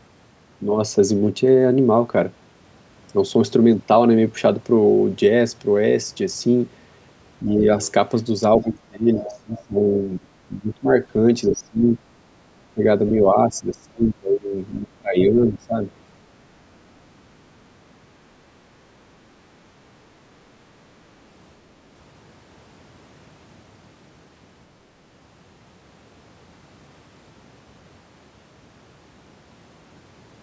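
The speech dips slightly at 7.42–7.5 s, then loses far more level, around 20–25 dB at worst, across 8.63–10.89, 11.51–11.85 and 12.63–15.78 s. This pattern is speech suppressed in double talk, likely an echo canceller turning everything down while both sides spoke. Brief scraps of the other side's voice leaking through, faint but louder at 15.19 s, appear at 7.81–7.92, 9.58–9.64 and 15.19–15.24 s, likely loudspeaker echo left uncancelled.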